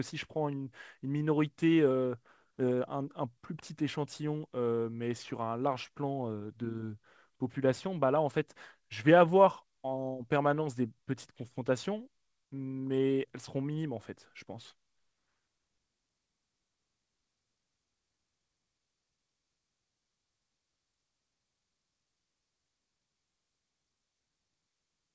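The speech shows no technical faults, having passed through a WebRTC call path working as intended, with its wideband call codec leaving nothing above 8 kHz.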